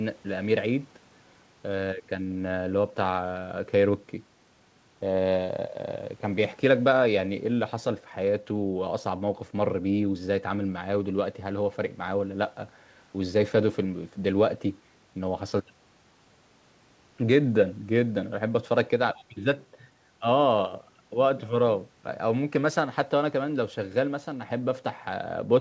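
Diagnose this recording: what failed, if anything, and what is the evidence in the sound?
Nothing here has failed: it's speech carried over a call path, and the way everything stops at 8 kHz is just the ordinary bandwidth of a wideband call codec, which fits something like G.722 at 64 kbps.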